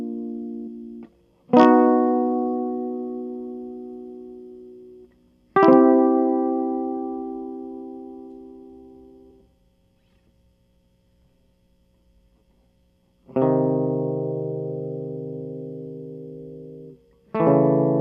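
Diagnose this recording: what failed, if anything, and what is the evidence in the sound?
The codec stage failed: damaged data in a compressed stream made the decoder misread frames and lose sync until it found the next valid header. In this music, that is heard as a short glitch from 0.66 to 0.68 s and another blip at 9.3 s.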